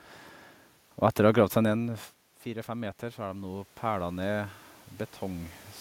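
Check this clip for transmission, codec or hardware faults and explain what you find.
One fault turns up in the speech: automatic gain rising, from 1.68 to 4.61 s. Around 1.5 s the talker moves away and the level at the microphone falls by about 14 dB. The gain control reads that as too quiet an input and slowly adds about 7 dB over nearly three seconds. Voice and room noise swell together. On a waveform, the envelope creeps upward across that span. On a spectrogram, the noise floor between phrases brightens along with the speech.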